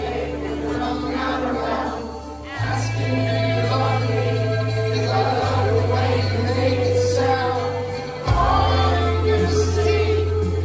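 No technical faults are audible.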